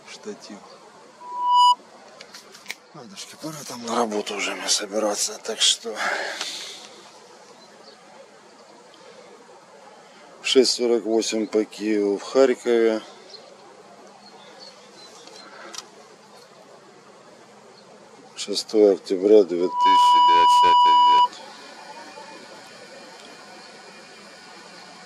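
Loudspeaker feedback squeal at 1.20–1.76 s and 19.60–21.30 s: the mic-speaker loop runs away at 981 Hz, a pure tone swelling within half a second to well above the sound.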